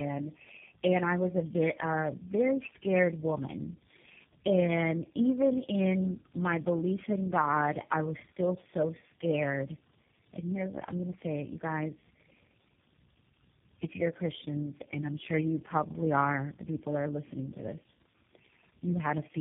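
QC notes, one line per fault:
throughout, tandem speech coding: The speech seems to have been decoded and re-encoded across several low-rate speech codecs, pointing to about four in a row. Each coder works on the previous one's damage, so speech turns rough, muffled and warbly, with nothing above 3.6 kHz.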